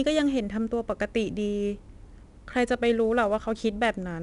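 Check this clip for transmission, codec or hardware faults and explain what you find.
There's one codec fault, and it runs through the whole speech clip: 4-bit ADPCM compression. Each sample is coded as a coarse 4-bit step away from a predicted value, with the step size adapting as it goes, so the error rises and falls with the level. You hear a gritty hiss riding on every loud syllable and some roughness on sharp onsets. Nothing gets through above about 10.7 kHz, which fits a reduced sample rate and a bitrate around 89 kbps.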